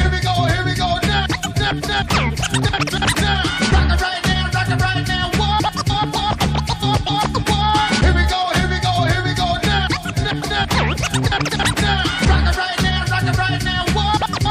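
Nothing in the audio stood out as a technical problem on listening.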